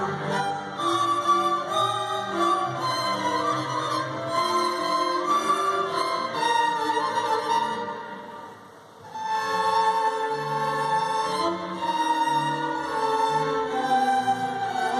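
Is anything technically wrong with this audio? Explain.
No, nothing stood out as technically wrong on listening.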